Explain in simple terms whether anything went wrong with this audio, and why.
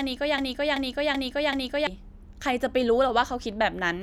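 From 0.38 to 1.87 s the speech gets stuck in a broken-record loop: the same 0.38-second piece plays four times back to back, identical each time, and the speech meant for that stretch is lost. This is likely a stalled player or stream. Unlike an echo, nothing fades or overlaps.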